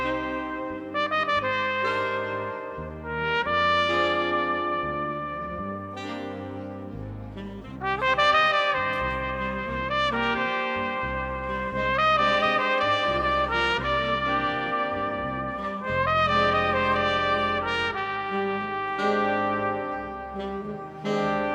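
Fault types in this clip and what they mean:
None: no technical faults are audible anywhere in the audio.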